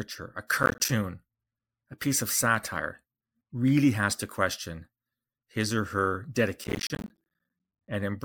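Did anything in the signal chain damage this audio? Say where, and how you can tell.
Yes. Processor overload crackle from the driver or buffer stage. From 0.63 to 0.89 s, and again from 6.64 to 7.88 s just after "his or her", the speech breaks into a burst of gritty crackle. The processor was repeatedly missing its deadlines for short buffers of roughly 10 ms, and each missed buffer was filled with silence. The resulting hard-edged gaps, about ten in the first burst and several dozen in the second, merge into tearing that stops once the load eases.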